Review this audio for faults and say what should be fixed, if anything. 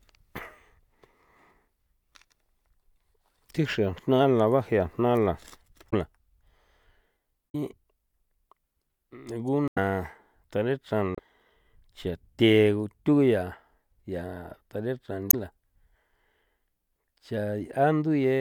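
Damaged data in a compressed stream causes brief glitches at 5.89–5.93, 7.49–7.55, 9.68–9.78, 11.15–11.19 and 15.27–15.34 s, where corrupted frames were misdecoded, showing as sudden broadband vertical smears on a spectrogram. Prevent this with checksummed transport and retransmission or re-encoding from an intact source.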